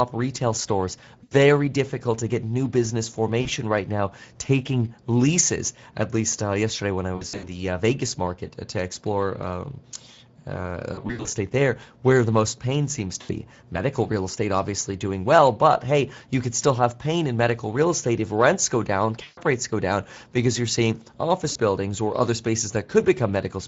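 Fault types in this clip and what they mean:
Speex codec: a CELP speech coder running here at 16.8 kbps, where the excitation is starved of bits, leaving the speech plainly hoarse and noisy throughout. On a spectrogram the harmonics look smeared and grainy, with noise filling the gaps between them instead of clean striations.
VoIP packet loss concealed by the speech codec: the decoder covers lost 20 ms frames by stretching its last pitch and filter at falling gain, heard as brief buzzy or fading smears at seven points from 1.23 to 21.51 s, including after "uh yesterday when I". The waveform shows decaying repeated cycles, and the spectrogram shows frozen harmonic bands.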